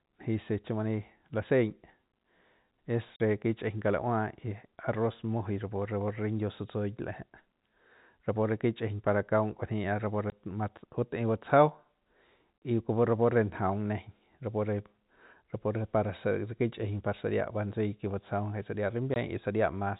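Lost packets were replaced with silence, known as packet loss filled with silence, which cuts hard-edged holes at 3.16–3.20, 10.30–10.32, 12.61 and 19.14–19.16 s. The gaps run 20 to 40 ms, which fits 20 ms packets over the band-limited telephone path.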